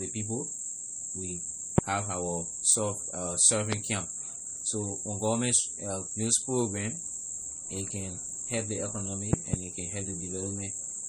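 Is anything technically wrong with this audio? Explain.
Yes, there are two problems. Throughout, the speech has plainly audible MP3 compression. It sounds watery and swirly, with chirpy sibilants and smeared attacks. That's likely from encoding at a low bitrate, consistent with something like 48 kbps, so the encoder drops weak frequency lines that then flicker frame to frame. Nothing is present above about 20.9 kHz.

There are also loud pops: a single one at 1.78–1.81 s and another at 3.73–3.75 s, each roughly 25 dB above the speech, then a pair at 9.33–9.56 s around 20 dB up. They're likely voltage spikes from a plug, switch, static or driver glitch, sitting on top while the speech carries on underneath.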